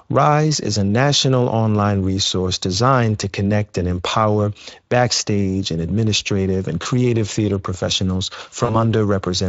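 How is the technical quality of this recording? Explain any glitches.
The recording has two short dropouts from VoIP packet loss concealed by the speech codec, heard through Speex coding whose light texture fits a bitrate near 28 kbps. The first falls at 6.83 to 6.87 s, between "backstage and administrative and" and "theater professionals", and the second at 8.65 to 8.76 s, just after "theater professionals". About 20 ms of audio went missing at the first and about 40 ms at the second. The decoder filled each gap by extending its last pitch and filter with falling gain, so the sound smears into a brief buzzy tone or coloured noise that fades, then stays weak or distorted before recovering.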